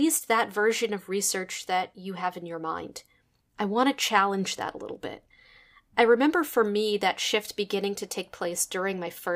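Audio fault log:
No faults are heard in this speech clip. There is nothing to log at any point in it.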